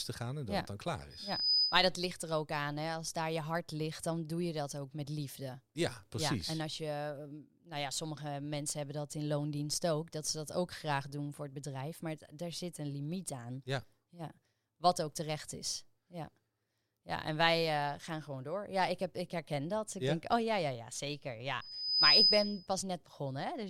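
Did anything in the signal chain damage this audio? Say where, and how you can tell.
Yes: loudspeaker feedback squeal, as the mic hears its own speaker. A 5 kHz tone swells well above the speech at 1.10–1.87 s and 21.61–22.67 s.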